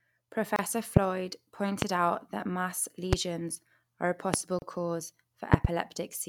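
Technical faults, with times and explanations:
0.56–0.59 s and 4.59–4.62 s, gap at a join of encoded pieces: separately encoded segments, placed every 4.0 s, were joined without trimming the encoder's start delay and final-frame padding. The speech drops to silence for 26 ms, then 32 ms, with smeared edges, and resumes where it stopped.
0.97–0.99 s, 1.82–1.85 s, 3.13–3.15 s, 4.34–4.36 s and 5.54–5.67 s, loud pop: a sudden voltage step or pulse, likely from a plug, switch, static discharge or driver glitch, entered the signal path. Each event is a sharp pop roughly 25 dB above the speech, which continues underneath. The last event contains two pops in quick succession.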